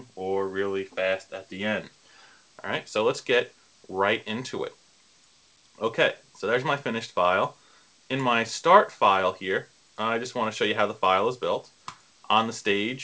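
No faults to report: the audio carries the band-limited character of a wideband call path, with nothing above 8 kHz, consistent with G.722.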